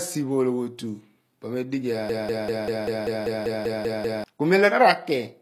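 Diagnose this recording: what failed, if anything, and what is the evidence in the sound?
The whole speech clip carries plainly audible codec damage that sounds like HE-AAC compression, likely at a low bitrate, which fits something around 24 kbps. The treble is there, reaching about 20.5 kHz, but it's rebuilt rather than real. The codec only properly codes the lower spectrum and copies those bands upward under a coarse envelope, so the top harmonics don't line up with the ones below. That's why the s sounds come out gritty and a bit lispy.

Then there's a broken-record loop from 2.09 s to 4.24 s. A single slice of about 0.19 s plays back to back, identically, 11 times over. That points to a stall somewhere in the playback or streaming chain, likely a buffer that stopped getting fresh data and kept resending the last fragment it had. Whatever should have played in those two seconds is simply gone.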